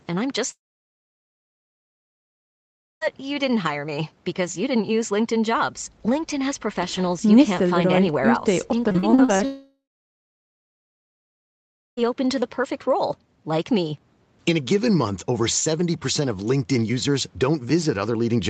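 From 0.51 to 3.03 s the speech stops for about 2.5 s. A brief fading buzz carries the last sound. Then there is silence for roughly 2.4 s. This is a long network dropout, likely a stretch of lost packets. The missing speech never returns.

From 8.89 to 9.41 s the sound turns choppy and robotic. There are seven short holes, the longest 38 ms. Each is patched by stretching the previous sound. About a third of this span is filled in this way. This is repeated packet loss.

A second long network dropout follows right after, from 9.45 to 11.99 s. Again a short fading tail covers the gap before silence takes over, for roughly 2.2 s. The likely cause is another run of lost packets. That part of the speech is gone. Throughout, the sound ends near 8 kHz, which fits a wideband call codec such as Opus at around 24 kbps.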